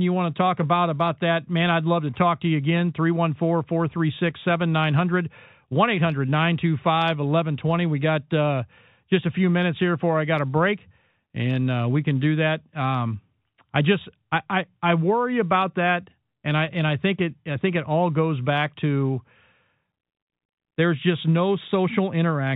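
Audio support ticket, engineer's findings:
No faults found; telephone-band G.711 coding as expected.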